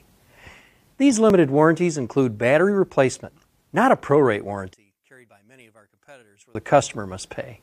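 Two tiny skips break the audio at 1.30 s and 3.31 s, spaced 2.0 s apart, which fits an overlap between stream segments trimmed away by the player. Unlike a dropout, nothing falls silent: a few milliseconds of real sound vanish and the waveform jumps. From 4.73 s to 6.55 s the level collapses by about 31 dB, leaving only a faint residue. That remnant, rather than true silence, distinguishes it from a mute, and the likely cause is one channel inverted, cancelling the shared content when summed to mono.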